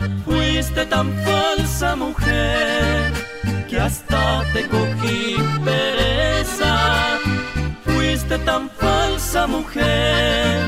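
No technical faults can be heard anywhere in this audio.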